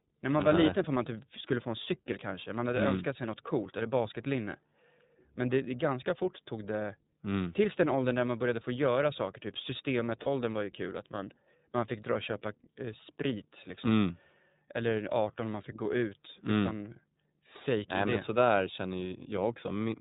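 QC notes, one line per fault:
Throughout: iLBC codec, narrowband with nothing above 4 kHz; speech sounds clear but slightly rough and synthetic, which fits 30 ms frames at 13.33 kbps.
10.23–10.27 s: lost iLBC frame, about 30 ms concealed by a repeated pitch cycle mixed with noise, giving a brief buzzy held vowel; clean again at "var ju kul att".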